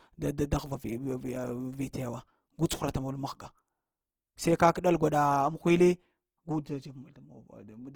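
Throughout, the speech sounds grainy and rough, likely from Opus compression at a rate fitting about 16 kbps; a spectrogram shows noise-filled bands reaching about 20.2 kHz.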